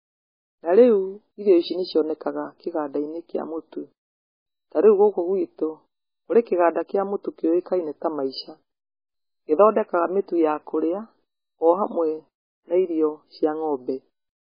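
MP3 compression damage runs through the whole speech recording, start to finish, and it is heavy. Nothing is heard above 5 kHz, a hard ceiling that leaves the sound dull and muffled, and the degradation fits a very low bitrate of around 16 kbps. The likely cause is an encoder starved of bits, chopping off the treble at a fixed frequency and discarding weak spectral detail so that what remains flickers between frames.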